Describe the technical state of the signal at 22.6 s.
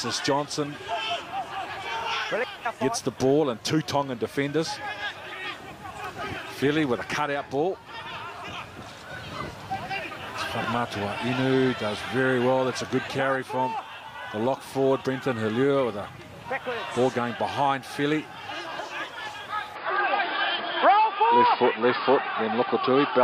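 At 22.6 s the sound is dull and boxy, with nothing above 5 kHz, a new background noise sitting well below the signal, and a level a few decibels different from before. This is the input switched to a poorer device, from 19.75 s to the end of the clip, with no gap at the changeover. The likely cause is the recording path moving to a lower-grade microphone or a headset call profile, whose narrow band, own noise and gain replace the original input.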